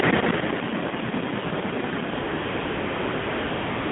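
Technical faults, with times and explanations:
Throughout: AMR narrowband mobile codec. The speech sits in a telephone band of roughly 150 Hz to 3.6 kHz, and the codec damage is plainly audible: a buzzy, synthetic edge, as each 20 ms frame is rebuilt from a vocal-tract filter excited by a handful of pulses. The coarseness points to a low mode, around 7.4 kbps. On a spectrogram the energy stops at a hard ceiling near 3.6 kHz and thins below 150 Hz. Harmonics look smeared and grainy.
2.14–2.18 s and 2.20 s to the end: AMR comfort noise. The phone treated the talker as silent and stopped sending speech frames, first for 40 ms and then for about 1.8 s until the clip ends. The receiver filled both gaps with synthetic noise built from a rough estimate of the background's level and spectral shape. The real background gives way to a steady, smooth hiss that switches in abruptly. On a waveform this shows as a flat, even noise floor. 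On a spectrogram it is a uniform, structureless band with sharp onsets.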